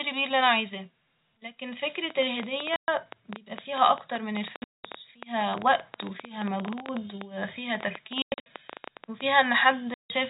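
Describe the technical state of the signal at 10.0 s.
At 10.0 s the speech drops into a dead hole: sound stops abruptly at 9.94 s and returns at 10.10 s, with hard edges and complete silence between. This is packet loss filled with silence. About 160 ms of audio never arrived, and the receiver played silence in its place. That span fits eight 20 ms packets. The surrounding band-limited G.711 telephone coding carries on as before around the gap.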